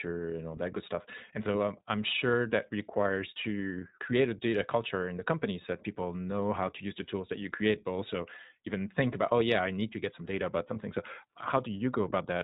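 Throughout, the speech passes through the iLBC codec, which fits its 15.2 kbps mode with 20 ms frames. Everything above 4 kHz is gone, leaving a plainly rough, slightly synthetic narrowband sound. Lost iLBC frames appear at 10.74 to 10.78 s, about 20 ms of audio, consistent with a single lost frame. The decoder fills the gap with a repeated pitch cycle mixed with noise, heard as a brief buzzy held vowel before the sound recovers immediately.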